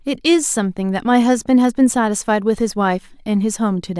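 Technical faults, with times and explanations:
No technical faults detected.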